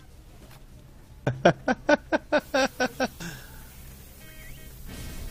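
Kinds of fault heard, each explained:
pre-emphasis left on: a treble boost matching the 75 µs FM curve was never undone, so from 2.4 s the highs stand about 14 dB proud at 10 kHz, bright and sibilant.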